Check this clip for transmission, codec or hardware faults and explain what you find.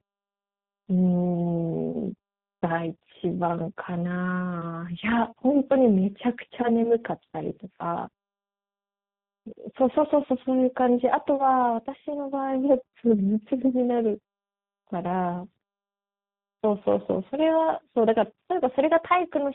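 Yes, there is one fault, and it runs the whole length of the speech: tandem speech coding.

Throughout, the speech has passed through two speech codecs in a row. Its character fits an ADPCM stage such as G.726 followed by G.729A, with a G.711 A-law link between them. Each coder re-encodes the previous coder's already damaged output, so their errors pile up. The result sounds rough, muffled and warbly, with nothing above 3.8 kHz. On a spectrogram, energy stops at a hard ceiling near 3.8 kHz, and the harmonics look smeared and blurred rather than crisp.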